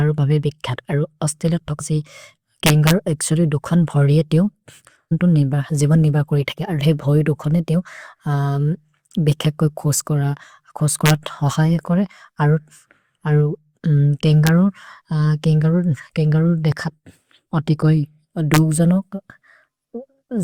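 At 2.66 to 2.91 s, just before "एक्सोरि दुखन्", loud peaks break into violent cracks. This is integer overflow. The signal runs about 3 dB past the largest value the integer format can hold. Instead of being limited, each peak wraps around to the opposite sign and jumps across the full range. That makes it far harsher than ordinary clipping.

At 5.11 s a brief glitch cuts in. This is damaged data in a compressed stream. Part of the encoded data is corrupt at that spot. The decoder misreads the frame, loses sync and searches for the next valid header.

The same overflow cracks come back at 11.06 to 11.10 s, about 1 dB over. Another is at 14.47 s, where the peak sits right at the limit. The last is at 18.54 to 18.58 s, about 1 dB over. These are shorter than the first. Each is still a sharp, splintering snap where the peak wraps to the opposite sign.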